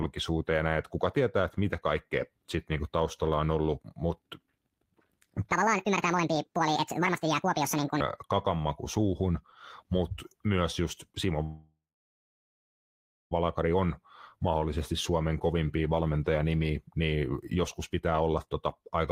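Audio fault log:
11.43–13.33 s, call audio freeze: the speech stops and the last sound is carried on as a brief fading buzz or hiss, then about 1.54 s of silence fills most of the 1.88 s gap. This is likely packets held up in transit until the jitter buffer ran dry, so the receiver stretched what it had. When the audio resumes it picks up exactly where it left off, with nothing lost, but everything after arrives 1.88 s later.
17.16–18.86 s, jitter buffer speed-up: right after "kovimpia valmentajanimiä" the speech runs at about 109% of normal speed while keeping its pitch, so it sounds hurried. The buffer was holding more audio than its target, and the receiver trimmed short pitch-period-sized pieces in quick succession, roughly 150 ms in total, to bring the delay back down.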